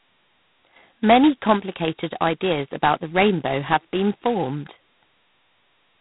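G.726 ADPCM damage throughout: heavy prediction-error quantisation, pointing to 16 kbit/s, adds harsh rasping hiss that tracks speech level, with nothing above 3.9 kHz.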